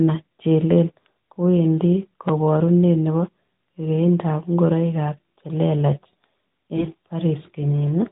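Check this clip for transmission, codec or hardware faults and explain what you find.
One fault: AMR bit errors from 6.74 to 6.88 s. For about a seventh of a second the speech turns hoarse, scratchy and gargly, while its pitch and loudness stay roughly in place. The cause is corrupted bits in the less protected parts of the mobile codec frames, at a rate of a few percent. The damage spans what fits about six 20 ms frames. Those bits slipped past the frame checksum, so the decoder placed its excitation pulses wrongly and took slightly wrong pitch, gain and spectral values. Elsewhere the narrowband AMR coding itself is audible as a band limit at 4 kHz with light coloration, which fits its highest 12.2 kbps mode.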